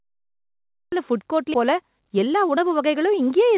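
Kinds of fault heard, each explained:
Cut-off start: The capture or stream started late, so the audio opens on digital silence and then cuts straight into speech already in progress at 0.92 s. There is no natural onset and no gentle fade-in. The first sound bursts in from nothing, so whatever was being said before the recording began is simply absent and the clip begins abruptly partway through.
Skip ahead: A run of audio was discarded while later audio was already queued, so playback jumped forward with no filler inserted. At about 1.54 to 1.56 s roughly seven tenths of a second of speech disappears, and the sound on either side of the jump is butted together almost directly. The listener hears an abrupt discontinuity where the speech lurches forward and the lost material is never heard.
Jitter buffer speed-up: After the skip, the receiver's buffer still held more audio than its target, so it repeatedly trimmed short pitch-period-sized slices to bring the delay down. 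From about 1.64 s to 3.2 s this removes around 70 ms in total, running the speech at 104% speed with no change in pitch. The delivery runs slightly fast, though the pitch of the speech stays the same.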